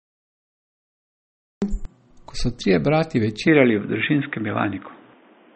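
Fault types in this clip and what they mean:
MP3 compression: Throughout, the speech sounds watery and swirly, with smeared consonant attacks and nothing above 8.4 kHz. This points to MP3 coding at a low bitrate, likely around 32 kbps, where starved bits leave weak frequency lines flickering and the encoder cuts the treble at a fixed frequency.
Cut-off start: The clip opens on dead digital silence, then the speech appears abruptly at 1.62 s, already mid-sound, with no natural onset or fade-in. The recording or stream began late, so the beginning of that sound is simply missing.
Input switched to a poorer device: From 3.47 s the speech abruptly turns dull and boxy, losing everything above 3.8 kHz, with a level shift of a few decibels and a faint new background noise. This is likely a mid-recording change to a narrower-band microphone or headset input.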